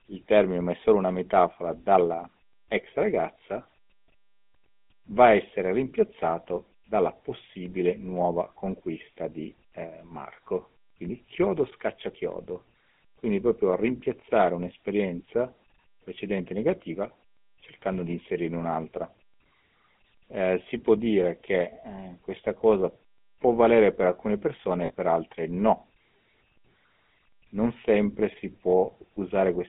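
Speech run through the GSM full-rate codec, which models the vocal tract and drives it with a sparse pulse train, so the whole clip has a plainly audible buzzy, gravelly edge, consistent with roughly 13 kbps. Everything is squeezed into a telephone band of about 150 Hz to 3.6 kHz. Then there are lost GSM frames from 24.86 to 24.91 s, right after "valere per alcune persone" and before "per altre no". The decoder just repeats the last good frame, so you get a short rough, metallic ring about 40 ms long, which fits two dropped frames.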